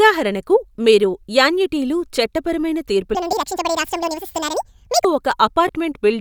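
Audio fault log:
3.15 to 5.05 s: section at the wrong speed. This stretch was likely played back against the wrong clock, running at 1.74 times its recorded rate. Because speed and pitch are tied together here, the speech jumps up by about ten semitones and rushes along, sounding high, thin and hurried. It starts and stops abruptly at the section's edges, with the surrounding speech at normal pitch and pace on either side.
3.32 s and 5.68 s: lost LE Audio frames. The Bluetooth LE Audio link dropped one frame at 3.32 s, about 7.5 ms, and two frames at 5.68 s, about 15 ms. Each time the LC3 decoder filled the gap by repeating the last spectrum with randomised signs. Any tonal part of the speech briefly turns into a short noisy smear. The first dropout falls inside the sped-up section, and the second is twice as long.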